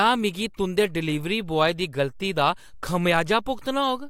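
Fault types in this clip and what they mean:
No fault types turn up here; it's just a short bit of speech with nothing going wrong that a listener would pick up on.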